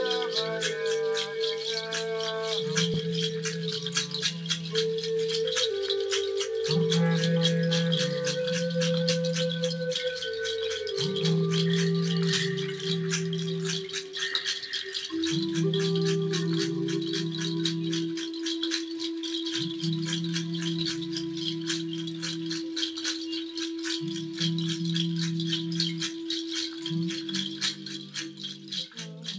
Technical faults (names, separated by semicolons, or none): skip ahead; jitter buffer speed-up